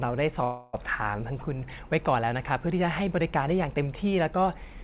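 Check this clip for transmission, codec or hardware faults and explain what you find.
There's one fault here, a call audio freeze in the speech, with the narrowband sound topping out at 4 kHz as G.711 mu-law would. From 0.44 to 0.75 s the sound stalls into a fading buzz for about 0.3 s, likely because late packets emptied the jitter buffer. It then resumes where it stopped, with nothing lost.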